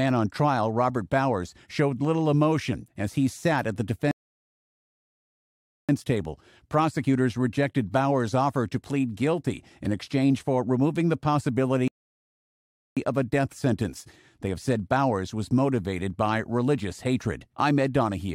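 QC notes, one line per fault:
4.11–5.89 s, rebuffering stall: playback halts into silence for about 1.8 s while the player waits for data, then resumes exactly where it stopped.
11.88–12.97 s, rebuffering stall: the buffer runs dry again, adding about 1.1 s of silence before the sound continues with nothing skipped.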